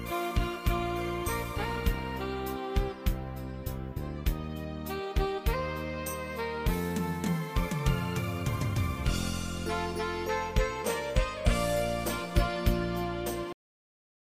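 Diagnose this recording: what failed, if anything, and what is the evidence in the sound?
A cut-off end at 13.53 s is the failure, and it sits at the driver or buffer stage. The sound is still in progress when it stops dead, and from there to 14.31 s there is pure digital silence with no decay or natural tail. That abrupt drop means the final buffers of audio were never written out or played. Capture or playback ended before the material did, leaving the last stretch empty instead of letting the sound finish.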